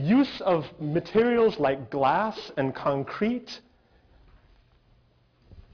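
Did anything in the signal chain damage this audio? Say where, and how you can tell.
Yes. Aliasing runs through the whole clip: the high end sounds gritty and metallic, with stray tones that don't follow the pitch of the material, and the spectrum stops hard at 5.5 kHz with energy packed right up to that edge. The folded content sits roughly 25 dB below the signal. The damage is at the sample-rate conversion stage. The rate was cut, which fits a drop from 44.1 kHz to 11 kHz, without an anti-aliasing filter first, so everything above 5.5 kHz mirrored back down into the band.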